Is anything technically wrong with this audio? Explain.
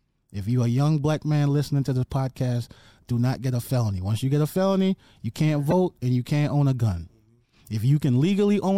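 Yes. At 5.70 to 5.73 s, just after "a felony you can't" and before "and you can't own", a brief, sharp chirp-like blip cuts across the speech and peaks at roughly -10 dBFS. This is a corrupt frame decoded: flipped bits in what sounds like a single compressed frame were played by the decoder anyway. The damaged gains and codes put energy at the wrong frequencies for the frame's roughly 26 ms length.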